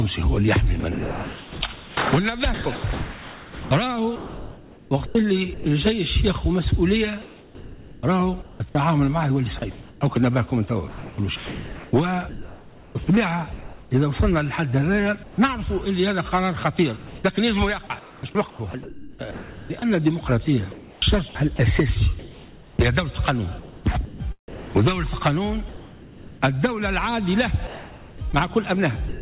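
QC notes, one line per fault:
0.8–5.66 s, 7.22–13.91 s, 16.97–29.21 s: sound chopped by the voice detector. Sound repeatedly gives way to synthetic hiss, about 2.9 s, 3.3 s and 4.4 s in total. Likely voice detection switching transmission on and off.
15.23–15.38 s: sound dropped by the voice detector. A 150 ms gap of steady comfort noise swallows roughly 60 ms of quiet sound. The likely cause is the detector mistaking it for background.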